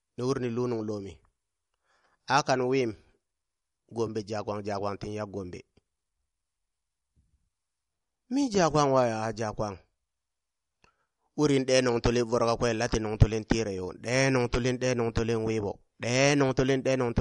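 MP3 compression is the likely cause throughout: the speech stops dead at 11.2 kHz, and weak frequency lines flicker frame to frame, sounding watery, as fits about 48 kbps.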